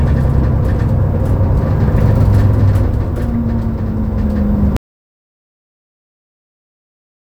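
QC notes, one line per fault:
4.77–7.20 s, audio dropout to silence. The sound cuts off mid-flow at 4.77 s and never returns, leaving about 2.4 s of silence to the end. No room tone remains. The input was likely lost, with silence written in its place.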